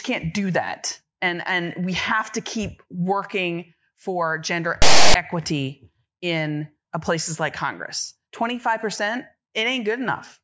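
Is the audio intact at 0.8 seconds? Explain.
Yes, the speech is intact at 0.8 seconds, with no dropout, click, distortion or other fault audible at that moment.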